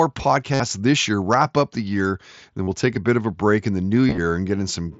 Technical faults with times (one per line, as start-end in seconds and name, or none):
0.54-0.60 concealed Bluetooth headset packet loss
2.63-2.68 concealed Bluetooth headset packet loss
4.07-4.18 concealed Bluetooth headset packet loss